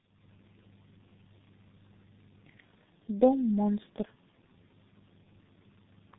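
Tandem speech coding affects this speech throughout: the sound is rough, muffled and warbly, with nothing above 3.8 kHz. It points to three speech codecs in a row, likely ending in G.723.1, each re-encoding the previous coder's already degraded output.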